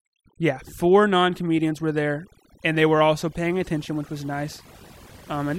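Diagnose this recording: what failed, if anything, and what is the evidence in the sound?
The failure is overdone noise removal in the call-processing stage, and it runs through the whole speech clip. Between phrases the background drops to near silence dotted with twinkling specks. A suppressor set far too hard is cutting individual frequency bands whenever their level sits close to its noise estimate, so quiet parts of the voice vanish along with the noise. What separates this from a low-bitrate codec is where the damage falls: it follows level, gutting the pauses and soft detail rather than smearing the whole signal evenly.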